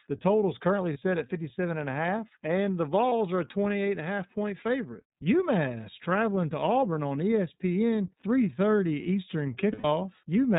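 iLBC codec coding runs through the whole speech clip, with plainly audible damage. Each frame's excitation is coded on its own, and the result, which fits the 30 ms, 13.33 kbps mode, sounds slightly rough and synthetic, with nothing above 4 kHz.

Lost iLBC frames come next at 0.93 to 0.97 s, between "total is currently" and "set at", and at 3.09 to 3.12 s, between "a half and the" and "are a", each a 30 ms gap. A longer 120 ms gap follows at 9.72 to 9.85 s, which fits four consecutive lost frames. In each gap the decoder repeats the last pitch cycle mixed with noise, giving a brief held, buzzy vowel that fades over the longer loss. The voice then recovers almost immediately.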